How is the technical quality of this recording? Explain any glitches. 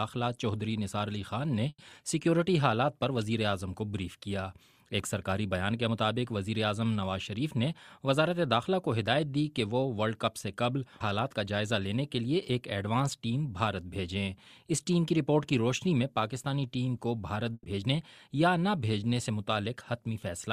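The recording has two glitches, each occurring twice, near 2 s and near 17.5 s.

Burst of packet loss, at 1.69 to 1.91 s and 17.53 to 17.67 s: lost packets were concealed by stretching and fading the last sound for 90 and 110 ms. About 60 ms goes missing each time, and the second ends in a brief silence.

Jitter buffer speed-up, at 1.92 to 2.29 s and 17.73 to 18.28 s: the receiver trimmed pitch periods to shed the built-up delay. The sound runs about 12% and then 6% faster at unchanged pitch, so both stretches sound briefly hurried.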